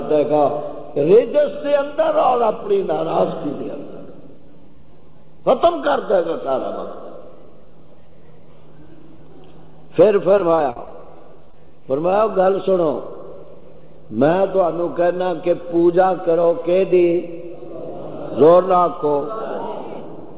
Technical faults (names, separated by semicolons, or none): repeated packet loss (robotic sound); short concealed packet loss